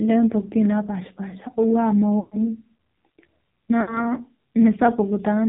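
Throughout, the speech passes through the AMR narrowband mobile codec. Everything above 4 kHz is gone, so the sound is muffled and thin. The codec rebuilds the voice from a simple vocal-tract model fed with sparse pulses. Here the damage is heavy. The voice sounds buzzy and synthetic, which points to a low rate of around 6 kbps. Consonants lose their edges and vowels take on a metallic, artificial tone.

From 2.20 to 2.49 s come the first lost AMR speech frames. About 120 ms of frames failed their radio checksum, which fits roughly six frames. The decoder filled the gap by repeating the last good pitch and vocal-tract settings while lowering the gain. The sound smears into a stretched, fading drone, then drops out. From 3.82 to 4.10 s a shorter loss of about 60 ms, fitting three frames, causes a briefer drawn-out dip.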